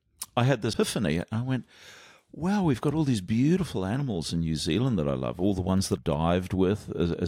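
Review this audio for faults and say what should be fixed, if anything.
Two CD skips occur in this speech, at 0.73 s and 5.97 s. At each, the laser jumped onto another turn of the disc's spiral, so playback mutes for a few milliseconds and resumes from a different spot, jumping the speech to another point. On a waveform each shows as a near-flat gap of a few milliseconds followed by a discontinuous restart. A spectrogram shows a thin vertical click line with mismatched harmonics on either side. To prevent it, rip the disc with a secure, error-correcting ripper on a stable, vibration-free drive after cleaning the disc surface.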